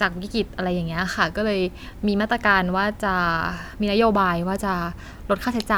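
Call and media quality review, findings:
No audible faults found in this speech recording; no action required.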